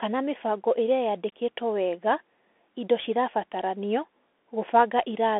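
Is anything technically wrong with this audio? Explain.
Yes. Throughout, the speech carries Bluetooth CVSD headset codec damage. Nothing passes above about 3.8 kHz. The line band sits near 250 Hz to 3.6 kHz. One-bit up-or-down coding with adaptive steps smears fast transients. S sounds turn scratchy over a granular hiss.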